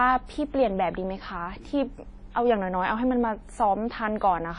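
Throughout the speech, a washy, ringing smear with hiss that swells alongside the signal and a hard ceiling near 10.1 kHz points to likely WMA compression at a low bitrate, around 32 kbps.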